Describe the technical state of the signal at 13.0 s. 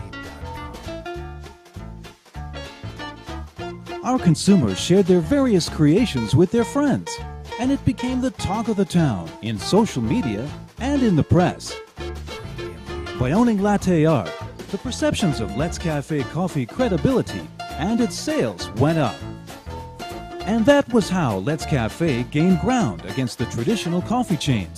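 At 13.0 s the signal is intact, with no audible fault at that moment.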